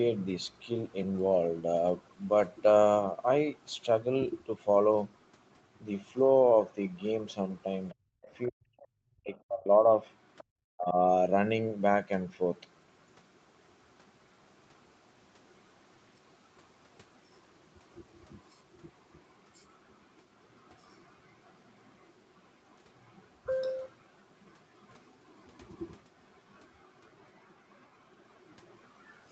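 From 7.90 to 7.95 s a faint scrap of the other side's voice leaks through, about 30 dB below the talker, and from 7.91 to 8.12 s the talker's speech dips by as much as 40 dB. Both point to an echo canceller facing double talk: the far end's voice, played on the loudspeaker, was likely not fully removed from the microphone, and with both sides talking at once the canceller turned the talker down too.

The same pattern continues. The other side's voice leaks through again at 8.22 to 8.48 s and 8.79 to 8.87 s, also about 30 dB down. Speech suppressed in double talk takes out most of the stretch from 8.50 to 9.67 s, about a second in total, with cuts reaching roughly 40 dB.

Another leaked fragment follows at 10.38 to 10.44 s, a little stronger at about 25 dB below the talker. A final dip in the talker's level of up to 40 dB comes at 10.74 to 10.96 s.

The whole recording also carries the band limit of the call path, with nothing above 8 kHz, which fits Opus at 24 kbps.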